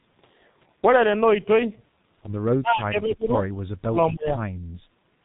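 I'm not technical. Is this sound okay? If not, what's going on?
No. The whole clip has gone through the G.723.1 codec, an old internet-phone format that compresses speech very hard. It discards all the upper treble and follows the voice only coarsely, so everything sounds muffled and hoarse, with smeared consonants.

From 2.59 to 3.44 s, and again from 3.87 to 4.41 s, the voice drops sharply, fading to a faint remnant in places. This is likely speech suppressed in double talk: an echo canceller heard both people talking at once and turned this talker down along with the echo.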